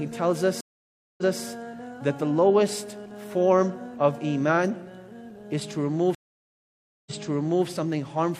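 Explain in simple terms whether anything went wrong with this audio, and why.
Two stream reconnects: the connection dropped and the player restarted mid-stream, so the sound cuts out, then resumes slightly earlier, repeating a moment. At 0.61 to 1.42 s, about 0.57 s of silence replays 0.23 s; at 6.15 to 7.67 s, about 0.91 s of silence replays 0.6 s.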